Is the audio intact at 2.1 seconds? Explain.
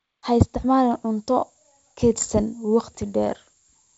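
Yes, the audio is intact at 2.1 seconds, with the speech carried cleanly through wideband G.722 telephone coding.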